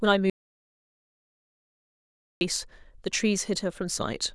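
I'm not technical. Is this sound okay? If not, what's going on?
No, not quite. Right near the start, at about 0.30 seconds, the speech cuts out completely and doesn't come back until about 2.41 seconds. That's an audio dropout to silence: for roughly two seconds there's nothing at all, not even the faint background hum of the room. Whatever was said in that stretch is simply gone. The likely cause is the microphone or its connection briefly dropping out while the recording kept going.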